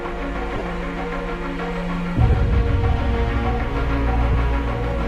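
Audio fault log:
0.55–0.62 s, lost LE Audio frames: about 45 ms of audio goes missing, scattered over 60 ms, with the longest single gap around 20 ms. The decoder fills each gap by replaying the last spectrum with random signs, so the sound blurs into a noisy smear instead of dropping to silence or stuttering as a plain repeat would.
2.32–2.34 s, lost LE Audio frames: a 22.5 ms gap fills with the same smeared concealment, which fits three 7.5 ms frames.
4.32–4.34 s, lost LE Audio frames: another 22.5 ms loss, concealed the same way.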